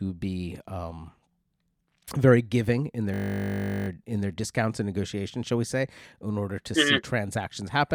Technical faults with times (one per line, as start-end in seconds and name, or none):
3.14-3.88 system hang loop